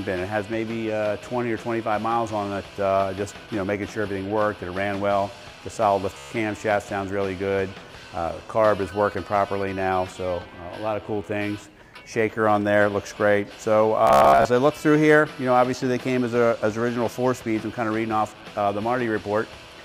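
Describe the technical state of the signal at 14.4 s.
At 14.4 s you're inside a Bluetooth stutter (14.07 to 14.45 s): late packets made the receiver replay short slices, about 261 ms lost, buzzing machine-gun style.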